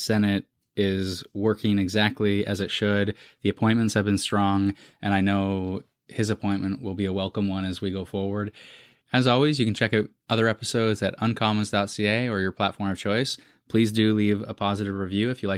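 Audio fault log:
No faults detected in this speech recording.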